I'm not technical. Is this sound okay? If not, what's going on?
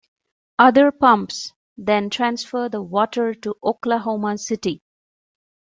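Yes, this sound is okay, and there's nothing going on that needs fixing.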